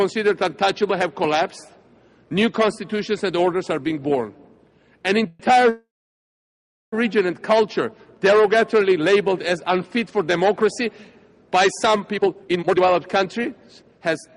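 At 5.27 s a call audio freeze begins: for 121 ms the last sound is stretched into a buzz or hiss that fades, and the audio then picks up where it stopped. A second freeze follows at 5.69 s and lasts until 6.94 s. The held sound fades into about 1.06 s of silence before playback resumes. The likely cause is packets delayed in transit that left the jitter buffer empty. Because nothing is skipped, each freeze adds its full length to the delay, 121 ms and then 1230 ms.

From 12.14 s to 14.32 s there is a jitter buffer speed-up. The receiver had more audio queued than its target and trimmed it by repeatedly removing short pieces one or a few pitch periods long. Across this stretch roughly 0.7 s is removed, so the audio plays at about 137% speed. The pitch stays the same, but the result sounds clearly hurried.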